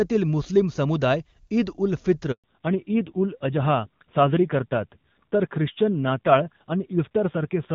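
A speech call where the network handover at 2.32 s delivers no speech frames for 120 ms, so the sound drops out until 2.44 s and that stretch is lost. The call then falls back to narrowband: from 2.44 s onward nothing above 4 kHz survives, and the speech turns dull and rough, fitting a low-rate narrowband codec replacing the clear HD Voice coding heard earlier.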